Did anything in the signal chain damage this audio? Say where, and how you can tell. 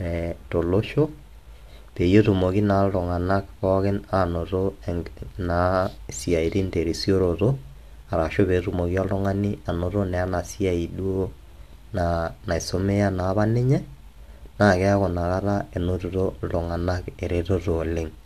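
No, nothing in this speech stood out on listening as damage from any stage of the chain.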